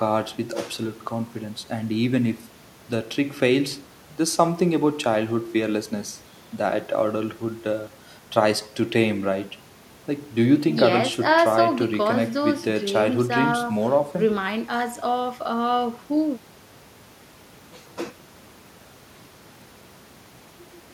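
No technical faults are audible anywhere in this speech recording.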